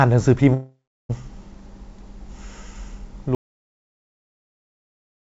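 From 0.54 to 1.11 s the speech breaks off. The last sound is stretched into a fading buzz, then roughly a third of a second of near-silence follows before speech resumes with a piece missing. This is a long network dropout, likely packets lost on the call link.

At 3.35 s the audio cuts out mid-flow into silence, with no room tone, and stays that way to the end. This is an audio dropout to silence, consistent with a lost input while the recorder kept writing silence.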